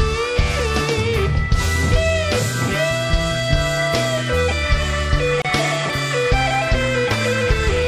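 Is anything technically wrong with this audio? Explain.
Yes. At 5.42 to 5.45 s, a gap at a join of encoded pieces: separately encoded segments were concatenated untrimmed, leaving a 29 ms silence with smeared edges before the sound resumes.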